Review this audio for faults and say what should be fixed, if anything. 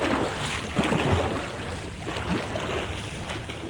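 Nothing here needs fixing; no faults were found.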